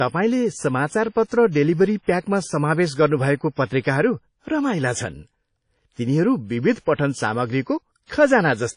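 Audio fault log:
throughout: WMA compression. The speech carries a ringing, washy haze and a hiss that swells and fades with the signal, and nothing sounds above 10.1 kHz. This is likely a Windows Media Audio encode at a rate around 32 kbps: long transform blocks spread quantisation noise over tens of milliseconds and zero weak spectral lines. Unlike steady background noise, the hiss breathes with the speech instead of staying level.
1.27–1.31 s and 8.04–8.10 s: pre-echo. A short hiss arrives just ahead of a sharp onset, about 45 ms early in the first case and 55 ms in the second, and the attack itself sounds soft and smeared. The transform block holding each attack spreads noise sized for the loud onset across the quiet moment before it. Echo or reverb trails after a sound, but this smear comes before it.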